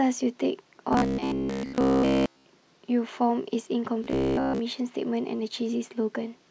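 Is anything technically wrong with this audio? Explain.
Yes. From 0.93 to 2.45 s and again from 4.04 to 4.59 s, the speech becomes a rigid, metallic 66.9 Hz buzz. This is robotic sound from repeated short buffers, likely from a roughly 15 ms block looping almost continuously. On a spectrogram it shows as evenly spaced harmonic lines, and on the waveform as identical repeating cycles.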